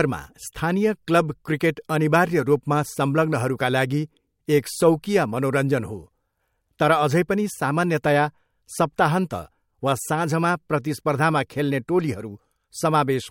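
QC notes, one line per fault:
No faults heard.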